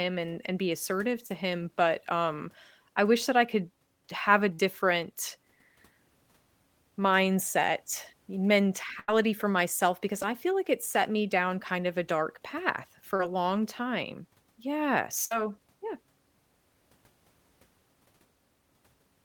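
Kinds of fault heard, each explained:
Short concealed packet loss: brief stretches of the call arrived too late and the receiver bridged them by extending the preceding sound, heard as quick smears or wobbles near 1.26, 10.22 and 13.16 s, each filling roughly 5 to 34 ms before blending back.
Burst of packet loss: several consecutive packets went missing, so the receiver stretched the last sound and faded it, leaving a held buzz or fading hiss around 4.54, 9.00 and 15.26 s, about 50 to 70 ms lost each, then resuming further on.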